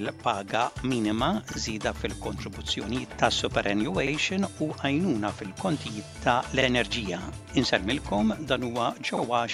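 A brief stutter recurs at 1.52–1.57, 4.07–4.12, 6.62–6.67 and 9.17–9.22 s: overlapping chunks, where each 2.5 s chunk replays about 48 ms of audio at the join.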